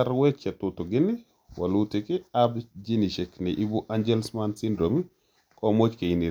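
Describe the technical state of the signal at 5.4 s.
At 5.4 s the speech signal is intact, with no audible dropout, distortion or other fault at that point.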